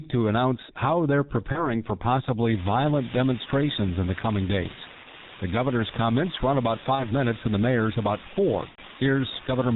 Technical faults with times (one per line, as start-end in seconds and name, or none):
0.00-9.76 G.723.1 codec
1.52-1.67 VoIP packet loss concealed by the speech codec
5.03-5.08 VoIP packet loss concealed by the speech codec
6.95-7.11 VoIP packet loss concealed by the speech codec
8.69-8.80 VoIP packet loss concealed by the speech codec